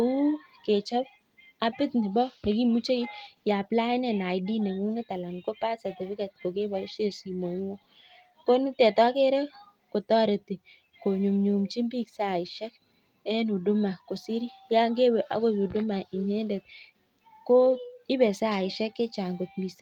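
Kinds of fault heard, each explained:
No kinds of fault are heard in this clip.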